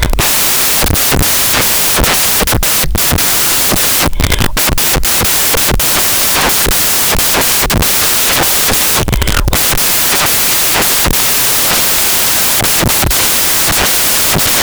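From start to finish the samples are built from the wrong bytes, so the noisy low bits swamp everything and the speech becomes loud hiss.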